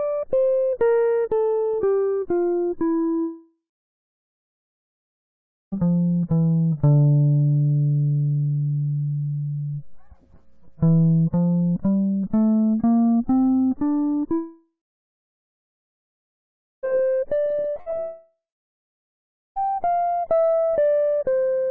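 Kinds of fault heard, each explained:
Long network dropout: the audio stream likely stopped arriving for stretches, and the receiver stretched the last music into a fading buzz before falling silent. Roughly 2.5 s vanishes from 3.22 s and from 14.34 s, and about 1.6 s from 18.0 s, mostly as silence.
Repeated packet loss (robotic sound): packets kept going missing in quick succession from 17.45 to 17.94 s, each hole patched by continuing the previous sound. Seven short gaps, none beyond about 60 ms, leave nearly half that span concealed, so the music turns choppy.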